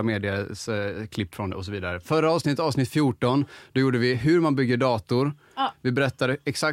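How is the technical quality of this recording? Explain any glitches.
Nothing in the speech stands out as a glitch, so there's really nothing here to explain.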